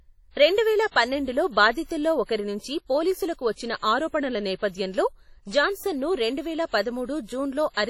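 Throughout, the speech sounds ringing and washy, with hiss breathing along and nothing above 17.9 kHz, likely heavy WMA compression fitting a 32 kbps stream.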